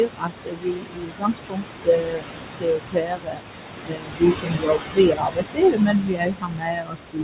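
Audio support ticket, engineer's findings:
Noise suppressor artifacts, throughout: background pulled down about 21 dB between phrases, rising under speech; room noise only about 5 dB below speech.

Speech cut by the noise suppressor, 0.0–3.42 s and 3.82–7.23 s: suppressor misreads speech as noise, dropping it up to about 22 dB; roughly 3 s of the first span affected, band already capped at 4 kHz.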